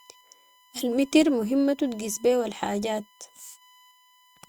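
Running under the speech from start to finish there's a steady 1 kHz USB whine, about 35 dB down, from the bus's 1 ms frame current leaking into ground or power.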